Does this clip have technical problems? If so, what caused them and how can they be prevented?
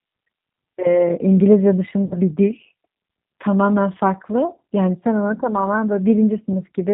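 Yes. The speech runs through a G.729 codec the whole way: rough, slightly synthetic, nothing above 4 kHz, which fits 8 kbit/s G.729A. A wider-band codec like Opus would avoid it.

At 2.06 to 2.15 s, VoIP packet loss concealed by the speech codec stretches the last sound into a fading buzz or coloured noise. That's about 60 ms gone, which fits two lost packets. A cleaner network path or jitter buffer with FEC would help.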